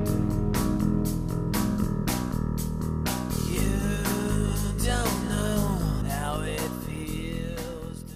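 Damaged data in a compressed stream shows up at about 1.84 s as a single short glitch that cuts across the audio for an instant. At that point part of the encoded data was wrong, whether lost, zeroed or overwritten, so the decoder could not read the frame correctly. It lost sync for a moment and hunted for the next valid frame header before normal decoding resumed.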